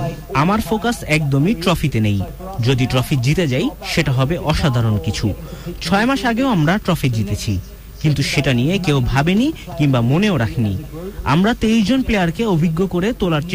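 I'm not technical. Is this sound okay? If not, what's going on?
No. From start to finish the sound has a grainy, gritty roughness that follows it, worst in the quietest moments, which break up or sputter. This is most likely low bit depth without dither: the audio was stored with too few steps, around 7 bits, and rounded down without smoothing.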